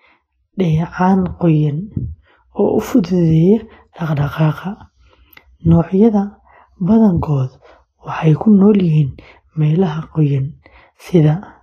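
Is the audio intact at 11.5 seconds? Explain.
No. At 11.5 seconds, as across the whole clip, the speech carries plainly audible damage that is likely Vorbis compression, fitting a low bitrate around 24 kbps. Nothing sounds above 14.1 kHz, and the remaining treble is quantised so coarsely that fine detail turns into hiss of similar energy, leaving the speech grainy with roughened tones and softened attacks. A plain low-pass filter would sound dull but clean, without this noisy treble.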